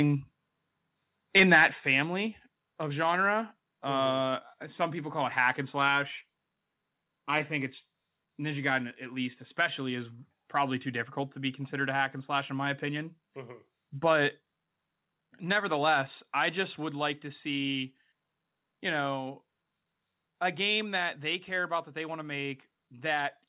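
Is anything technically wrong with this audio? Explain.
Yes. From 1.36 to 1.65 s there is microphone overload. The peaks drive about 6 dB past the converter's ceiling, and a few percent of samples are flattened. This likely happened because the input volume was set too high, so the loudest syllables take on a harsh, crackling edge. Saturation would sound rounder, but here the waveform tops are sheared off flat, which gives the brittle, gritty character that marks clipping at the converter.

There are also three sudden drops in level where the microphone volume stepped down. The first comes at 1.8 s, about 5 dB down, just after the distorted peak. The second, at 14.25 s, is about 1 dB. The third, at 16.86 s, is also about 1 dB and falls between "nevertheless I just" and "like to see". The likely cause is the call software cutting the device's input gain in single steps. The voice and the background room sound both drop together and instantly, and that separates this from a speaker moving away or a slow automatic gain ride.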